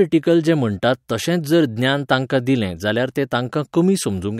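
No technical faults can be heard in this recording.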